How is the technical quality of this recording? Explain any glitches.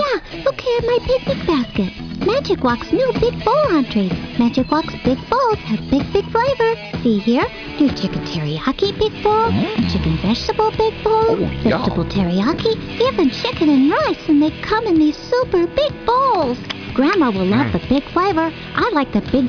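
No audible glitches or faults.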